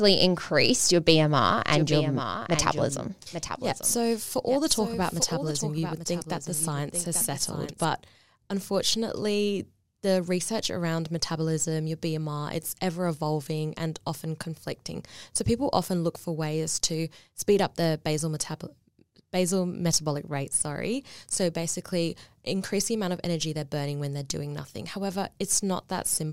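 From 1.73 to 7.85 s, a quieter, dry copy of the speech trails about a second behind, then cuts off abruptly: a doubled audio track, likely from a second, slower capture path.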